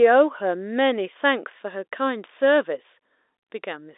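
No faults are present.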